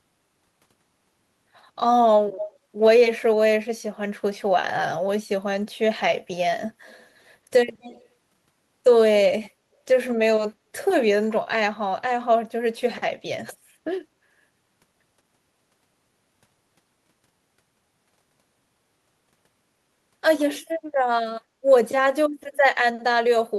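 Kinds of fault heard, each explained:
Echo leak: a distinct delayed copy of the speech returns 209 ms late, in brief scraps at 2.37–2.56, 7.81–8.08 and 9.42–9.5 s, each fainter than the last. This is likely a far-end echo canceller letting loudspeaker pickup through. Reverb would smear continuously instead.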